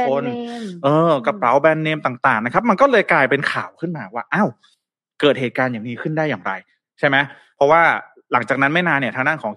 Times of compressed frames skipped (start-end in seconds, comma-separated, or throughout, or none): none